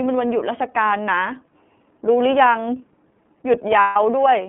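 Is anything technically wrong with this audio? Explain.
Yes, there are two faults. The iLBC codec affects the whole clip: each 30 ms frame's excitation is coded independently, within a 150 Hz to 3.4 kHz line band, which fits the 13.33 kbps mode. The speech sounds plainly rough and synthetic. Lost iLBC frames occur from 3.81 to 3.97 s, a gap of about 150 ms that fits five missing frames. The decoder repeats the last pitch cycle mixed with noise, giving a held, buzzy vowel before the speech recovers almost immediately.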